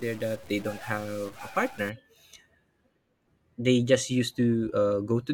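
A stuck bit runs from 0.00 to 1.89 s, giving the speech a grainy noise and filling pauses with noise. Likely one data bit is held fixed, a low bit worth roughly minus 45 dBFS, knocking about half the samples off by that step.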